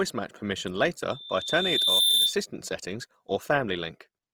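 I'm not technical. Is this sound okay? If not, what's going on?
No. Right after "match permission", at about 1.10 s, a single high whistle at about 3.6 kHz starts quietly and swells over roughly a second until it is louder than the speech, then stops at about 2.38 s. This is a loudspeaker feedback squeal: the microphone picked up the speaker it was feeding, and that one pitch kept going round the loop, growing louder each time.

Throughout the whole clip the speech has a rough, grainy, hissy texture, as if the sound were made of coarse sand rather than smooth tone. The likely cause is Opus compression squeezed hard: when the encoder runs short of data, it fills in parts of the sound with noise or borrowed pieces of lower sound instead of the real detail.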